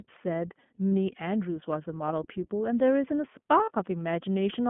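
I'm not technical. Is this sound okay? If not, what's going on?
No. Throughout, the speech sounds thin and a little rough and synthetic, like an old phone line with nothing above about 3.4 kHz. That's the iLBC codec, a phone-call compressor that rebuilds the voice in 20 ms chunks and discards the higher frequencies.

Twice, at about 0.88 to 0.93 s and 3.64 to 3.71 s, the speech briefly smears into a short buzzy, held sound. These are lost iLBC frames: about 40 ms of data went missing, so the decoder repeated the last bit of voice to fill the gap, then recovered almost immediately.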